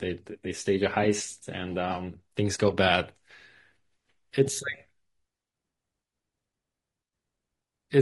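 Low-delay AAC compression runs throughout this speech, leaving it rough and grainy with noise between harmonics, likely from short-frame AAC-ELD coding at a rate fitting about 32 kbps.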